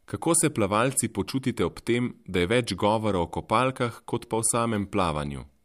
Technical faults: none

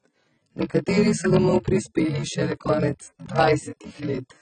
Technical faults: block size mismatch (padded); AAC compression

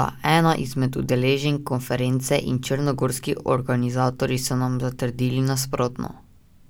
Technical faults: none

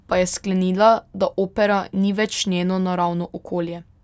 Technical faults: none

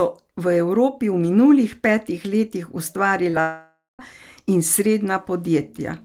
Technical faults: short concealed packet loss; long network dropout

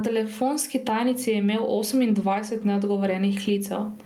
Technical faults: gain pumping

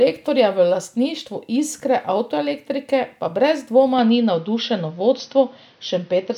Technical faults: input switched to a poorer device

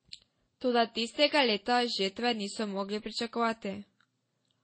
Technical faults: transcoding between lossy codecs

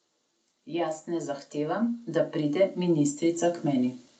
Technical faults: automatic gain rising

